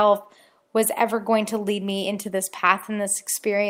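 No technical faults can be heard anywhere in this speech recording. There is nothing in it to mark with a time or trace to a cause.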